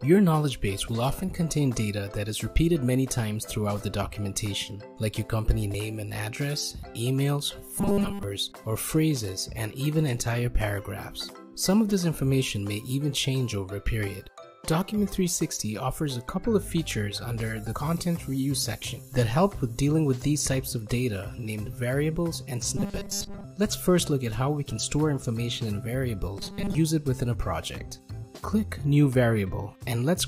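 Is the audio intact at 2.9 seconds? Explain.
Yes, the audio at 2.9 seconds is intact, with no dropout, click, distortion or other fault to be heard at that point.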